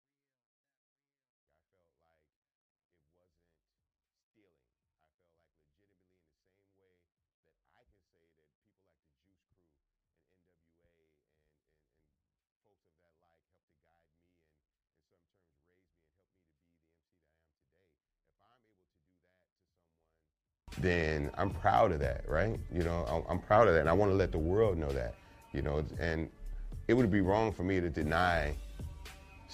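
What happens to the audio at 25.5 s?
At 25.5 s the audio plays through intact, with no dropout, click, distortion or other fault to be heard at that point.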